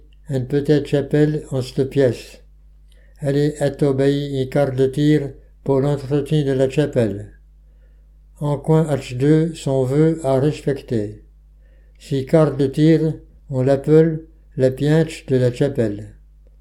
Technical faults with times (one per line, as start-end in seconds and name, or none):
none